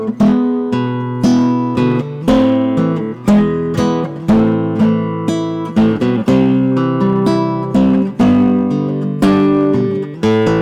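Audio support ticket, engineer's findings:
Hard clipping throughout the clip. Harsh fuzz on every loud passage. Signal driven about 11 dB past a gain stage or converter. Roughly 7% of samples flattened.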